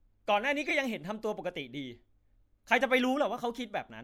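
At 0.64 s, lasting about 0.07 s, a short burst of chirpy, squeaky noise cuts across the sound until 0.71 s. This is a corrupt frame decoded: damaged bits in a few consecutive compressed frames were decoded as if valid, so misread gains and codes put energy at the wrong frequencies. Unlike a dropout, which leaves a gap or smeared concealment, this adds foreign energy, peaking at around -15 dBFS.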